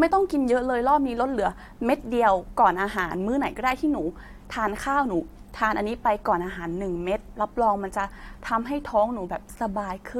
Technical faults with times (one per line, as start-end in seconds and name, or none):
none